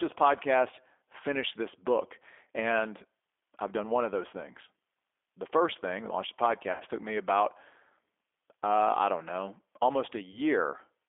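The whole recording is speech carried through the G.729 codec. The sound points to an 8 kbit/s stream. The band is narrow, roughly 300 Hz to 3.5 kHz, so there is no air or sparkle on top and little body below. The codec rebuilds each short frame from a vocal tract model and a few pulses. That leaves the speech clearly rough and slightly synthetic throughout. The damage is plainly audible.

At 6.72 s the speech breaks into VoIP packet loss concealed by the speech codec. About 80 ms of audio went missing, which fits four lost packets. The decoder fills the hole by repeating its last pitch and filter, with the gain falling. The result is a stretched sound that fades. It lasts until 6.83 s. Because each frame leans on the one before, the speech stays weak and smeared for a moment after.

At 10.32 s a shorter dropout of the same kind occurs, about 20 ms lost, a single packet's worth. The concealment is a brief smear ending by 10.39 s.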